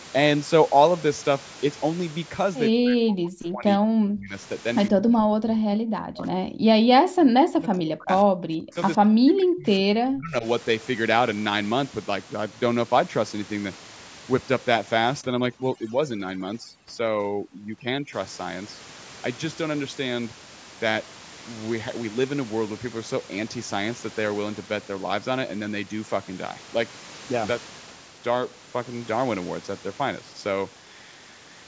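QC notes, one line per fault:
2.71–4.34 s, 4.90–6.56 s, 6.79–8.77 s, 8.97–10.45 s: speech suppressed in double talk. In each stretch the talker repeatedly dips by as much as about 40 dB, so that roughly a second and a half of each run is lost, with the signal thinning or dropping out in pieces. The likely cause is the far side talking at the same time. The echo canceller then cannot tell this talker apart from its own loudspeaker echo and pulls both down.
15.21–18.13 s: overdone noise removal. The room noise here, about 17 dB below the speech, is pushed down and breaks up into twinkling specks. The noise reducer is driving individual frequency bands hard toward zero whenever they sit close to its noise estimate, so quieter parts of the speech are cut along with the noise. What remains has its upper range already ending at 8 kHz.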